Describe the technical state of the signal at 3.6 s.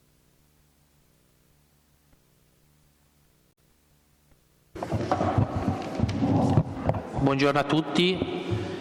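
At 3.6 s the signal is just coming out of damaged data in a compressed stream, which runs from about 3.49 to 3.58 s. The decoder met corrupted bytes, misread the frames there, lost sync and had to hunt for the next valid frame header, so those 90 ms come out as a brief chirp, squawk, click or short hole.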